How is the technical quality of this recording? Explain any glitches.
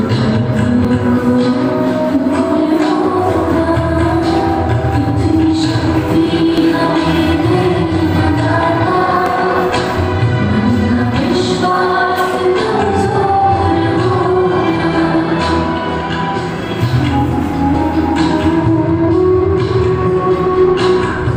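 The recording has a recurring glitch from damaged data in a compressed stream. You hear brief blips at 0.85, 6.58, 9.26 and 20.46 s, plus a longer glitch from 17.71 to 17.75 s. At each spot some bytes in the compressed file were wrong, so the decoder couldn't make sense of those frames, lost sync and hunted for the next valid frame header. That scramble is what comes out as a short glitch.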